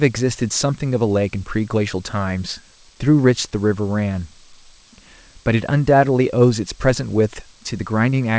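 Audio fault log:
No faults found; the speech arrives over a G.722 call path, which fits a 64 kbps setting, with nothing above 8 kHz, as that codec's band limit gives.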